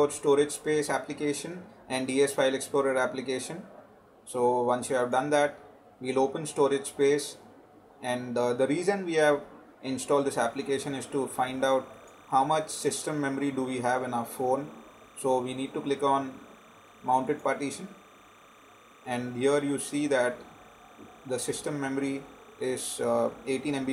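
From 10.48 s to the end there's timecode bleed: linear timecode, apparently 29.97 fps, leaking in around 30 dB down, chirping between roughly 1 and 2 kHz.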